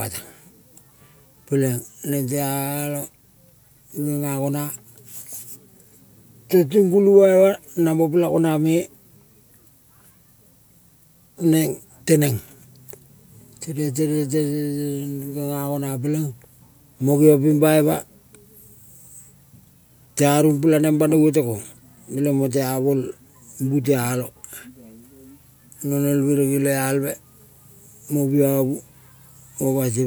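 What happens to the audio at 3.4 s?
Nothing goes wrong at 3.4 s; the speech runs on intact through that moment with no dropout, click or other disturbance.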